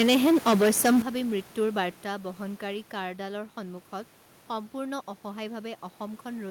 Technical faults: microphone overload; microphone volume stepped down

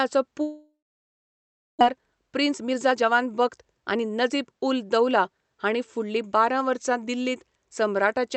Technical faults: long network dropout; jitter buffer speed-up

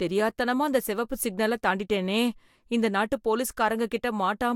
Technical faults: none

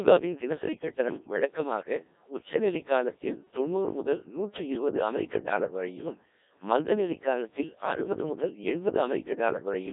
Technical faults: Codec 2 vocoder

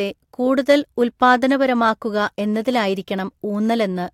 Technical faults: none

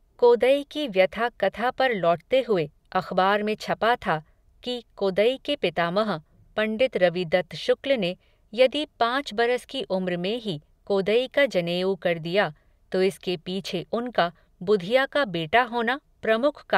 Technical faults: none

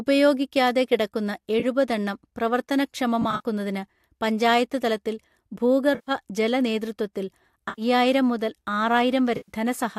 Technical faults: AAC frame loss with concealment

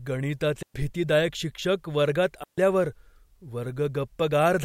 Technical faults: digital wireless dropout

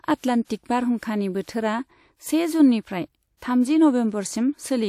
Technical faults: pre-echo

